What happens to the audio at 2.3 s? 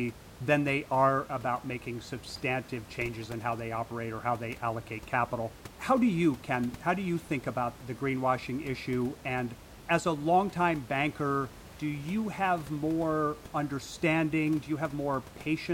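Nothing goes wrong at 2.3 s: the speech runs on intact there, with only the room's own background noise sitting about 19 dB beneath it.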